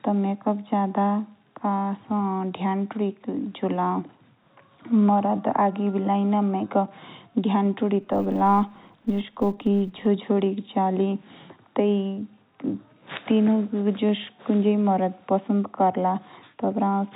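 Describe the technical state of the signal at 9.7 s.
At 9.7 s the speech falls within a filter restarted on every block, lasting from 8.02 to 10.06 s. The filter loses its memory at each block boundary and starts from silence, so every block opens with a small click. These clicks merge into a 200 Hz buzz that tracks the speech level.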